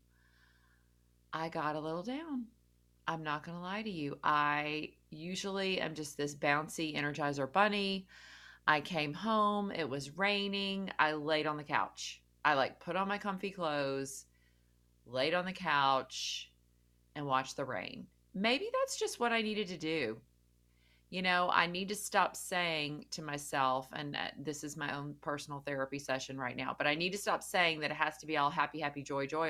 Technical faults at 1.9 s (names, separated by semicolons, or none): video or display buzz